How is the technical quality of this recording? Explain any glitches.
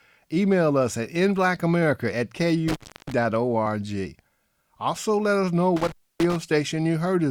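The speech drops out twice, with crackle at the edges of each gap: from 2.68 to 3.12 s and from 5.76 to 6.36 s, the signal vanishes for about 320 ms and then about 280 ms, leaving faint hiss. This is intermittent contact. A loose cable or plug briefly separates, breaking the signal path, and the scraping of the contacts as they part and reconnect produces the crackles around each silence.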